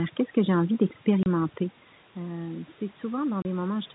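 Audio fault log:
throughout, overdone noise removal: the background drops and breaks up into twinkling specks. A noise reduction stage was set too aggressively, so individual frequency bands that dip close to its noise estimate are pulled far down or shut off entirely. Softer parts of the voice fall into those bands too, and the bands flickering on and off leave the sparkle in the gaps.
1.23 to 1.26 s and 3.42 to 3.45 s, packet loss filled with silence: the voice is cut by two brief dead holes, each about 30 ms long, with hard edges. Each gap fits the loss of a single 30 ms packet, which the receiver replaced with plain silence instead of concealing it. The level change heard around 1.5 s is the talker moving relative to the microphone.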